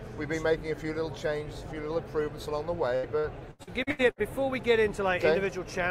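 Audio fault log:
2.95–4.21 s: repeated packet loss (robotic sound). Seven short gaps fall in this stretch, the longest about 80 ms. Each is patched by stretching the last sound forward, so about a third of the span is filler. The sound turns choppy, with pieces missing.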